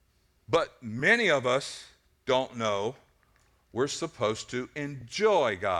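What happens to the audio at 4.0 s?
Nothing goes wrong at 4.0 s; the speech plays through that moment intact.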